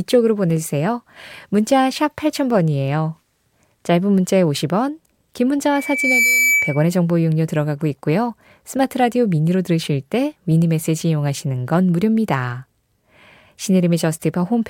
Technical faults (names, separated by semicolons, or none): loudspeaker feedback squeal